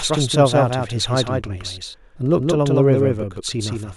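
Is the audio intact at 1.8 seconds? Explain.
No. At 1.8 seconds, and throughout the clip, the speech has a doubled audio track. A second full-band copy trails about 150 ms behind, roughly 5 dB quieter, with no decay or room colour. This is likely from a slower second capture path.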